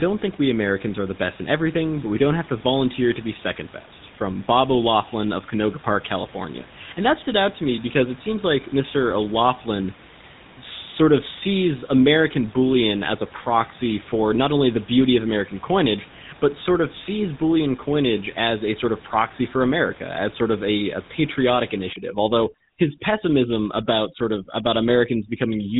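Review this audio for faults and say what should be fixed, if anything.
The whole clip passed through the GSM full-rate codec. It rebuilds speech from a vocal-tract model driven by sparse, regularly spaced pulses and discards everything above 3.9 kHz. The result is a buzzy, gravelly, band-limited voice, which fits a 13 kbps GSM stream. To prevent this, carry the call over a wideband codec instead of legacy GSM.

From 21.93 s to the end, just after "of a a patriotic", overdone noise removal kicks in. A suppressor set too aggressively cuts narrow bands it judges to be noise and takes quieter speech detail with them. The background drops and breaks up into twinkling specks, even though the room noise sits only about 23 dB below the speech. To prevent this, lower the suppression strength or bypass it when the noise floor is already modest.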